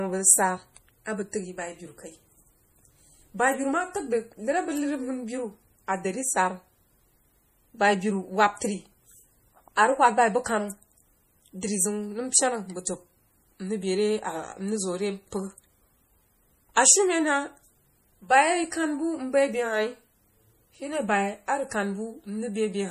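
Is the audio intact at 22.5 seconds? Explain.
No. At 22.5 seconds the speech carries MP3 compression damage, which runs through the whole clip. This is likely MP3 coding at a low bitrate, which fits about 40 kbps. Short of bits, the encoder cuts everything above 15.2 kHz. It also drops weak frequency lines, and these flicker on and off between frames. The result is plainly audible: a watery, swirling texture, metallic chirps on s sounds, and smeared attacks.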